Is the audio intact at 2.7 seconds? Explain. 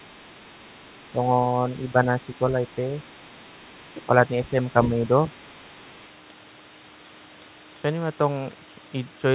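No, there's a brief fault from 2.68 to 2.75 s: the other side's voice leaking through, very faint, around 40 dB below the speech. It's likely the far end playing on the loudspeaker, reaching the mic, and slipping past the echo canceller as a short scrap.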